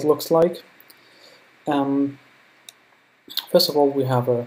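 At 0.42 s there is a single sharp click, the signature of dropped samples. A fraction of a millisecond of the stream is likely missing, so the waveform leaps straight from one value to a later one instead of moving smoothly between them. The gap is far too brief to remove any audible sound; only the discontinuity is heard. On a spectrogram it appears as one thin vertical line spanning the frequency range, and on the waveform as a sudden step.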